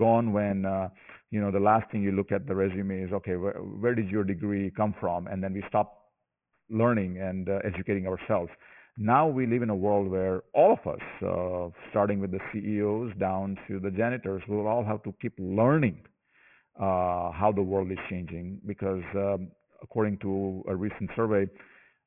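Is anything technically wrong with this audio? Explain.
Yes, there is aliasing throughout the speech. The audio was taken down to a much lower sample rate without an anti-aliasing filter first. The spectrum stops hard at 3 kHz, which fits a new rate of about 6 kHz. Everything above 3 kHz was never removed. It folds back below that edge as unrelated tones, roughly 20 dB under the speech. Sibilants sound gritty and metallic, with a harsh, brittle haze.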